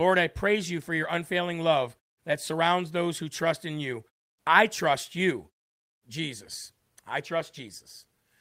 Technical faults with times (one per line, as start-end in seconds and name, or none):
none